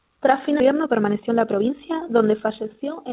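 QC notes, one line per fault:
throughout, overlap-add ripple: the level pumps up and down by about 6 dB roughly fifty times a second, so the speech has a fast, buzzy flutter, almost a robotic tremolo. That's frames being windowed and overlapped back together with an overlap that doesn't add up to a flat gain.
0.60 s, skip ahead: playback jumps straight forward with no gap filled in, so something like 0.7 s of speech just vanishes and the two sides butt together. It sounds like the buffer dumped a backlog of waiting audio to claw back delay.
0.69–3.09 s, jitter buffer speed-up: from just after the jump to near the end the speech runs about 11% fast at unchanged pitch, sounding rushed. The receiver kept snipping out short pitch-period chunks, around 0.3 s in total, to shrink an overfull buffer. This runs over a narrowband call path that tops out at 4 kHz.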